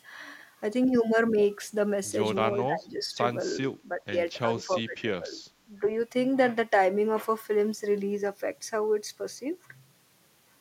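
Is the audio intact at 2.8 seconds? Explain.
No. From 2.58 to 3.2 s the speech dips by roughly 15 dB and thins out in pieces, about half a second in all. This is speech suppressed in double talk. Both ends likely talked at once, so the echo canceller turned everything down.

Inside that span, from 2.79 to 2.86 s, a faint delayed copy of the speech appears, very quiet, around 30 dB below it. It trails by 374 ms. This is echo leak: loudspeaker sound likely slipped past an echo canceller.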